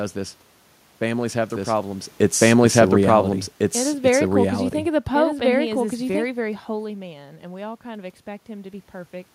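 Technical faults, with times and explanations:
1.50 to 6.24 s, doubled audio track: a second full-band copy of the speech runs alongside the original, at roughly the same loudness and trailing by about one and a half seconds. The copy carries no added decay or room colouring, so it sounds like a clean replay laid over the live sound. It cuts in abruptly at 1.50 s and drops out just as abruptly at 6.24 s. This is likely a second capture of the same signal through a slower path being mixed back in.
6.83 to 8.93 s, automatic gain rising: after the talker moves away from the microphone around 6.5 s, the input falls by about 10 dB. The automatic gain control reacts to the quieter signal and gradually lifts its gain by about 3 dB over roughly two seconds. Both the speech and the room noise swell together during this stretch, because the gain acts on everything the microphone picks up.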